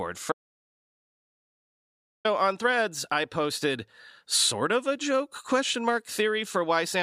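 From 0.32 to 2.25 s the speech cuts to dead silence, about 1.92 s lost: an audio dropout to silence, likely from the input briefly disconnecting.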